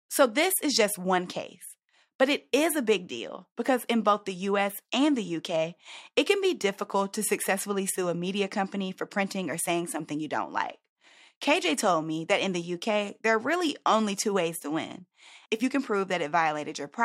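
No technical faults are audible.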